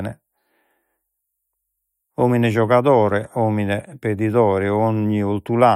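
The speech recording shows no technical faults at any point.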